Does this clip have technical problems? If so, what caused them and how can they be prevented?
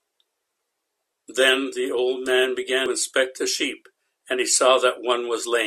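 Yes. At 2.86 to 2.88 s the speech is broken by a brief glitch, a damaged data in a compressed stream fault. Some bytes of the compressed file were lost, zeroed or overwritten at that point. The decoder could not read those frames correctly and lost sync. It then hunted for the next valid frame header and resumed from there. The result is a short blip lasting about 20 ms. Prevent it by adding checksums and error-resilient transport, and by verifying file integrity after copying or streaming.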